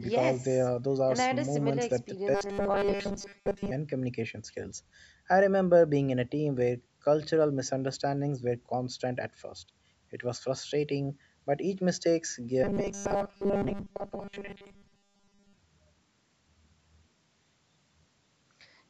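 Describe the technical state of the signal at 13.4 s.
Robotic sound from repeated short buffers covers 13.4 s, running from 12.64 to 15.58 s. The likely cause is starved playback filling gaps by looping a roughly 5 ms slice, so most of the real speech is skipped and a rigid 200 Hz metallic buzz replaces it.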